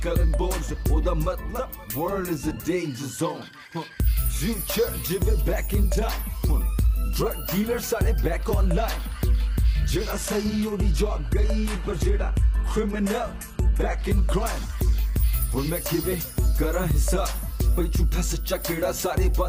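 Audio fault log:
10.12–14.12 s: adaptive stream at a lower bitrate. Quality drops suddenly with no gap, then recovers. Nothing is heard above 12.3 kHz. This points to a switch from a 96 kbit/s stream to a 16 kbit/s HE-AAC version.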